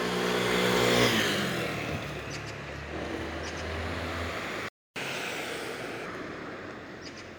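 A recording of everyday sounds, and at 4.68 s it cuts out into a playback stall: the output goes silent for about 274 ms, until 4.96 s, most likely because the player ran short of buffered data or its audio thread was blocked. From 4.96 s to 6.06 s there is catch-up at higher speed. The player works through its backlog at 1.25 times normal rate by resampling, so everything sounds hurried and roughly four semitones sharp before returning to normal speed and pitch.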